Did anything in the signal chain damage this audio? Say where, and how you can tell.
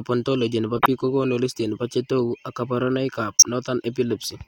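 Yes. Corrupt frame decoded, at the codec: a loud noisy burst from 0.75 to 0.86 s, between "ontology nebo" and "biik kokonu", and a shorter one at 3.36 to 3.43 s, both peaking near -5 dBFS. Flipped bits sent energy to wrong frequencies in the damaged frames.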